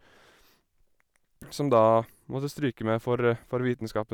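A speech recording with a short burst of hard clipping between 1.76 and 1.87 s, where the level runs about 1 dB past what the signal chain can pass. The peaks are sliced flat, giving a brief crackle. A waveform shows squared-off tops, and a spectrogram shows faint harmonic smear reaching high frequencies.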